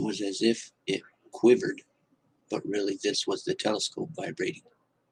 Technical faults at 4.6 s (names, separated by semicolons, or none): none